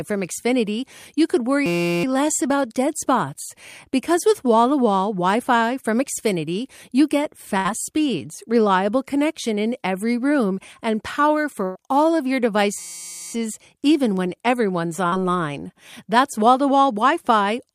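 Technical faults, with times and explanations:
1.66–2.04 s and 12.79–13.33 s, system hang loop: the playback froze while the hardware kept replaying one 5.8 ms fragment, 65 times and then 93 times. It is heard as a steady buzz at about 172 Hz, which fits a 256-sample buffer, and almost no speech is lost. On a spectrogram it appears as flat horizontal lines at multiples of 172 Hz. The waveform shows one identical cycle repeated exactly.
7.57–7.67 s, 11.65–11.77 s and 15.07–15.22 s, burst of packet loss: in each case a run of speech failed to arrive. About 80 ms, 100 ms and 40 ms are missing, and the receiver filled 73 ms, 104 ms and 47 ms by holding the last sound and letting it fade. The third fill also adds about 16 ms of extra time. A spectrogram shows a smeared, frozen band that decays, followed by an abrupt jump where the speech resumes.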